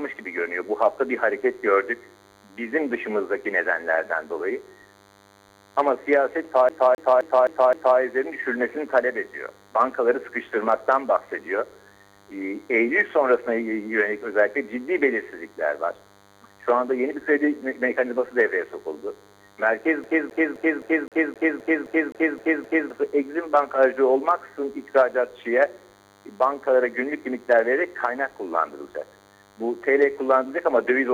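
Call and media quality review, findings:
DECT cordless phone buzz, whole clip. Thin, steady 100 Hz buzz with a dense harmonic series, sitting roughly 30 dB under the programme. Probable component: analogue input stage near a DECT handset or base. Mechanism: the radio's 10 ms burst cycle is rectified by the audio circuitry and demodulated into an audible 100 Hz tone.

CD stuck on one turn, 6.69–7.99 s and 20.04–22.90 s. Fast, even stutter: a 0.26 s segment replays 5 times in the first event and 11 times in the second, with a brief mute at each jump. Probable component: CD transport or disc surface. Mechanism: a scratch knocks the laser back one track at the same point every revolution.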